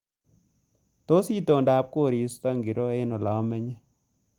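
Nothing in this speech recording stood out as a technical problem on listening, and the Opus voice compression at 24 kbps leaves it full-band, with content reaching up to about 20.1 kHz.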